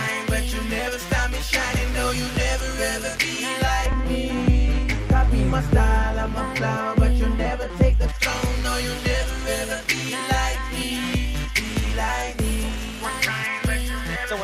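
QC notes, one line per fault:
3.86–8.09 s, de-emphasis applied wrongly: the high end tilts away smoothly and progressively across this stretch, reaching about 11 dB down at 10 kHz relative to 1 kHz. A treble-cut curve meant to reverse pre-emphasis has landed on material that never carried that boost, or has been applied a second time, so the top octaves sound dull and muffled. Unlike a low-pass filter or a codec bandwidth limit, there is no abrupt edge. The roll-off starts gently and deepens steadily with frequency.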